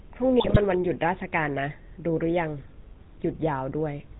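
A speech recording passed through the GSM full-rate codec, whose coarse pulse-excited model of the vocal tract gives it a buzzy, gravelly roughness throughout and an upper limit near 4 kHz, consistent with the 13 kbps full-rate coder, with plainly audible codec damage. From 0.40 to 0.57 s, GSM bit errors corrupted the decoder's filter, pitch and gain parameters, so the speech breaks into squawks, pops and gargling across what sounds like about eight damaged frames, pointing to a bit error rate of a few percent.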